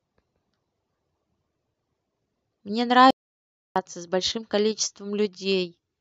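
From 3.11 to 3.76 s the speech cuts to silence, an audio dropout to silence, likely from lost input; unlike a pause, room tone vanishes.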